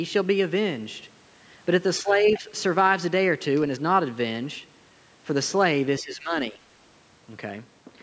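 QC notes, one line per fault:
1.99–2.5 s, speech suppressed in double talk: The talker's level dips by about 10 dB for roughly 0.4 s in all. Both ends were likely talking at once. The echo canceller then turned everything down, the talker included.
2.31–2.36 s, other side's voice leaking through: A brief scrap of a second voice comes in, about 20 dB below the talker. The likely cause is loudspeaker sound that the echo canceller failed to fully remove.
6.0–6.6 s, speech suppressed in double talk: The talker drops again, this time by about 15 dB, for roughly half a second. It is deeper than the first dip. The likely cause is the same canceller holding the level down while the far side spoke.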